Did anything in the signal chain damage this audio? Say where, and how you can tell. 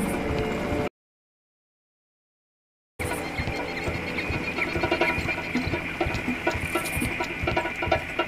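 Yes. Audio dropout to silence from 0.88 to 2.99 s: the sound stops dead into silence with no room tone, likely a lost input connection.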